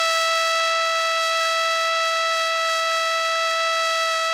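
Generation loss runs through the whole music clip: it sounds swirly, smeared and hollow, with blurred attacks. The likely cause is roughly four successive Opus passes, consistent with a 48 kbit/s chain, each requantising on a shifted frame grid so that noise accumulates, with content extending up to about 20.2 kHz.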